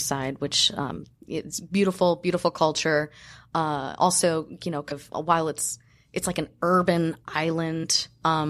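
Compressed frames were skipped at 0.95 s, 4.90 s and 7.83 s. The decoder drops whole frames of about 23 ms, so the speech jumps forward by roughly 70 ms, then 150 ms, then 50 ms, each join a brief smeared blip.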